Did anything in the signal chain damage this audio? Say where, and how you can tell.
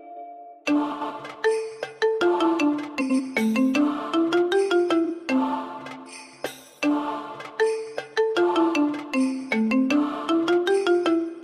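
Yes, frames out of order at the network or packet-reassembly stage. At 0.91–1.11 s and 3.00–3.20 s, two 93 ms blocks swap places, and at 5.05–5.11 s two 23 ms blocks do. Each swap produces a garbled flutter. Unlike a dropout, no time goes missing.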